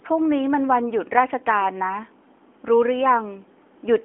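No technical faults can be heard in the speech, which sits in the narrow telephone band of roughly 250 Hz to 3.4 kHz and carries only the light coding roughness that fits a mobile speech codec running at about 12.2 kbps.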